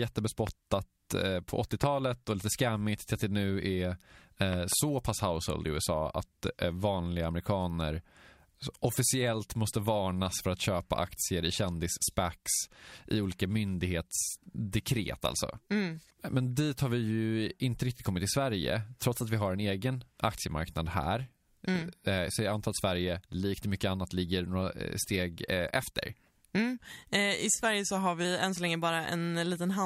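A speech recording with three loud pops and one drift correction step. Single pops land at 0.47 s and at 1.84 s, between "eh på" and "och lite skammigt till", standing about 15 and 20 dB above the speech. A double pop follows between 4.53 and 4.75 s, after "att det nu är" and before "pass household i". Each shows as a tall spike in the waveform and a full-height vertical stripe on a spectrogram, likely from an electrical transient such as a switch or static discharge. From 27.65 to 28.25 s, just before "än så länge", playback slows by about 5.2% and pitch drops about 93 cents, nearly a semitone. On a spectrogram the harmonics step down and then jump back, likely a clock-matching rate correction.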